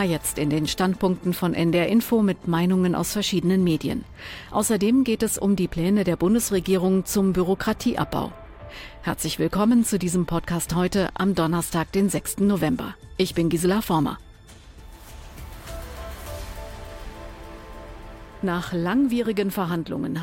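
Nothing in the signal points to a technical fault at any point in the recording.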